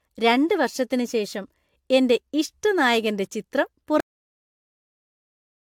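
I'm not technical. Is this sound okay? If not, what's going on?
No. The speech sounds swirly, smeared and hollow throughout. The likely cause is generation loss: it was squeezed and unpacked with lossy compression about four times over. At 4.00 s the speech stops mid-sound and drops straight to dead silence with no fade. That is a cut-off end: the final stretch of audio was never written.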